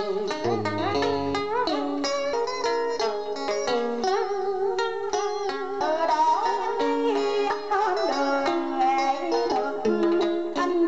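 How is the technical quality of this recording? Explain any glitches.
The recording has three brief glitches from compressed frames skipped. At 2.33, 5.80 and 7.50 s the audio jumps ahead by roughly 70, 100 and 70 ms, which fits whole 26.1 ms frames going missing or being rejected by the decoder. Each join is abrupt, and no silent gap is left.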